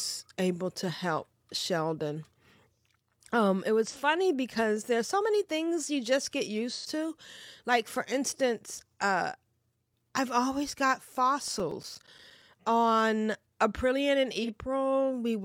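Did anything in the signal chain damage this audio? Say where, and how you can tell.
Yes. Codec stage: AAC frame loss with concealment produced brief smeared, phasey patches at 3.86 s, before "because there's so many", at 6.70 s after "things you just get", and at 14.43 s.

Storage and playback: CD scratch ticks, ten regular clicks, the longest roughly 10 ms, run from 11.48 to 12.54 s after "I've always got". Uncorrectable data recurs with each disc rotation.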